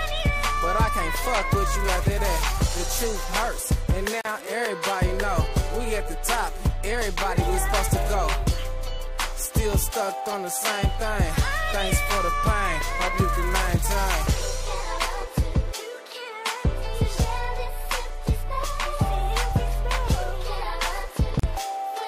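At 4.21 s and again at 21.40 s there's a gap at a join of encoded pieces: a gap of about 39 ms where separately encoded chunks were butted together untrimmed, then the sound resumes.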